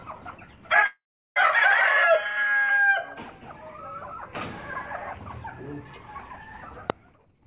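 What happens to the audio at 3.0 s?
Nothing goes wrong at 3.0 s; the audio carries on intact through that moment, with the narrowband sound of a call path that leaves nothing above 4 kHz.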